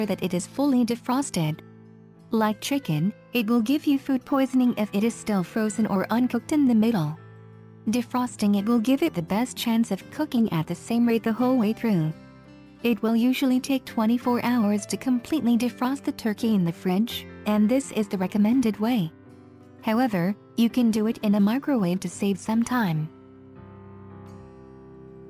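Nothing here stands out as a technical problem; the audio just runs along without any glitch, dropout or distortion to point to.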